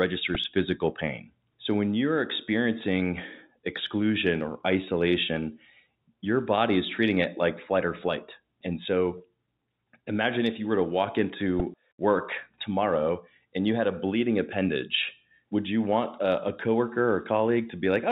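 A brief click-like buzz at 0.35 s, just before "physical pain", and again at 11.60 s, between "you were to walk" and "work tomorrow and you", is a repeated buffer. The playback device ran out of fresh audio and replayed its last block three and then four extra times, each with a hard join. The block length of about 1.45 ms fits a 64-sample buffer, and a few milliseconds of sound are lost each time.

From 9.18 to 9.20 s the sound briefly holds with a slight buzz. This is packet loss with pitch repetition: about 20 ms of audio went missing, which fits a single lost packet, and the receiver covered the gap by repeating the last pitch period before the live signal resumed.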